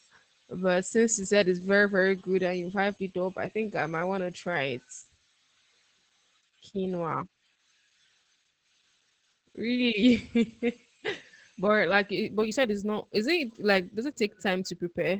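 From the start the whole clip carries Opus voice compression in its SILK speech mode. The band stops at about 8 kHz, which is wideband operation, and the speech sounds muffled and slightly hoarse, with a faint robotic edge from coarsely coded excitation. The damage is plainly audible and points to a low rate, around 12 kbps. The codec works in 20 ms frames.

At 12.16 s, right after "but like", sample clock jitter starts and runs to the end. The converter clock wanders by a few microseconds, so each sample is taken at a slightly wrong moment. The resulting error grows with the waveform's slope and sits roughly 35 dB below the signal. It adds a grainy hiss that swells on loud and sibilant sounds and drops away in pauses.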